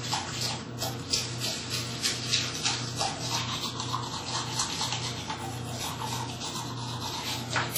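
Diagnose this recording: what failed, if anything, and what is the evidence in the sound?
The failure sits at the codec stage and runs through the whole clip: heavy WMA compression. Transients carry a washy, ringing smear spread over tens of milliseconds, and the background hiss swells and falls with the level of the sound instead of staying steady. Quieter detail drops in and out where the encoder has zeroed weak components. The bandwidth still reaches about 20.1 kHz, so the damage is coarse quantisation, not a lowpass, which fits a low bitrate near 32 kbps and a likely long-block transform encoder.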